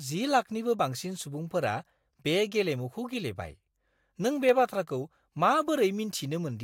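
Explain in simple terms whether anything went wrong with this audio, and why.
One fault stands out: a single sharp click at 4.49 s in this speech recording. It is a very brief tick, over almost instantly, and the speech around it is not cut or shortened. The likely cause is dropped samples: a handful of the tiny measurements that make up digital audio went missing, about a tenth of a millisecond's worth. The sound wave jumps abruptly from one point to a later one, and that sudden step is heard as the click.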